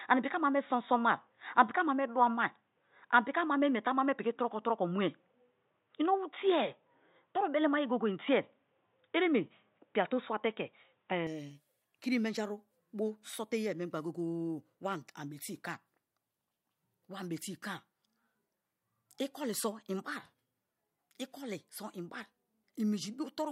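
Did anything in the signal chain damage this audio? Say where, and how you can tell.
Yes. Likely an input switched to a poorer device, 0 to 11.27 s, at capture: speech stops above 3.8 kHz, then widens gaplessly, level shifting a few dB.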